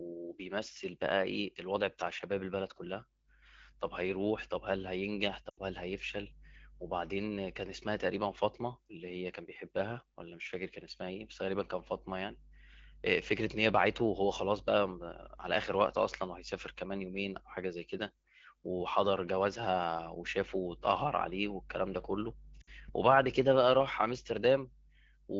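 A speech clip carried over AMR wideband (HD Voice), with light codec colouring, has two bursts of lost AMR speech frames. From 5.50 to 5.60 s, about 80 ms of audio smears and fades, which fits four 20 ms frames. From 22.61 to 22.70 s, about 60 ms does the same. The decoder stretches the last good pitch and tone with falling level, so the sound drags and decays instead of cutting to hard silence as in a plain dropout.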